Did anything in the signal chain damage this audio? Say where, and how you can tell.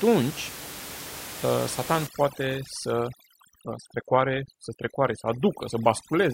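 Yes. From about 2.07 s to the end at 6.34 s, the call-processing stage applies overdone noise removal. The room noise, sitting about 13 dB below the speech, collapses into near silence with twinkling specks, and quieter parts of the speech are pulled down with the noise. The suppressor is gating individual frequency bands it judges close to the noise floor. A starved codec would smear the whole signal, whereas here the damage follows the noise level and begins at 2.07 s.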